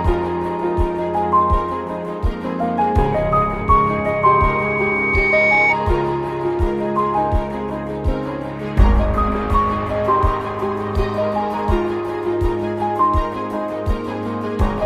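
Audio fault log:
3.12–5.76 s, loudspeaker feedback squeal: a single 2.2 kHz tone grows out of the sound over roughly two seconds until it sits a little above it, as the microphone-to-speaker loop runs away at that frequency. Unlike a steady interference whistle, it swells by itself before stopping.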